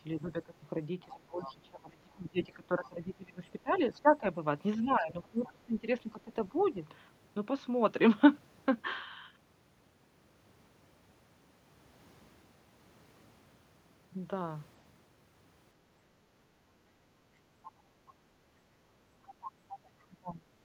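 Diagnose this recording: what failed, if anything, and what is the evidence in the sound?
Call processing stage, speech suppressed in double talk: from 0.16 to 6.81 s the speech sinks, for roughly five seconds in total and by around 20 dB at worst, and again at 20.07–20.47 s by around 25 dB. The echo canceller likely ducked both talkers during overlap.

Call processing stage, other side's voice leaking through: scraps of a second voice appear at 1.44–1.52, 3.74–3.78, 5.44–5.49 and 6.6–6.66 s, then longer at 19.24–20.04 s, about 15 to 30 dB under the speech. This is likely residual loudspeaker echo left by the canceller. Wiring crosstalk would run continuously instead.

Call processing stage, background gated by the echo canceller: between 15.86 and 19.68 s the room sound drops by about 8 dB, for roughly 1.5 s in total, and recovers afterward. The canceller clamped the microphone while the loudspeaker played. 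A noise suppressor would reduce the background steadily, without these timed dips.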